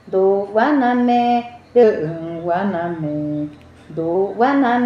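From 1.83 s to 4.15 s there's a wrong sample rate fault: the audio is being clocked out slower than it was captured, with no resampling. Everything in that stretch drags to about 0.92 times normal speed and drops roughly 1.5 semitones, so it sounds sluggish and a touch flat, then snaps back afterwards. That 0.919 ratio fits 48 kHz material being played at 44.1 kHz.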